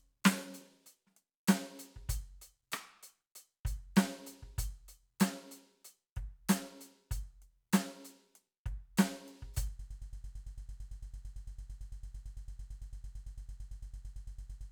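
Broken-record loop from 9.79 s to the end: a 112 ms music fragment repeats back to back, likely a stalled stream resending its last piece.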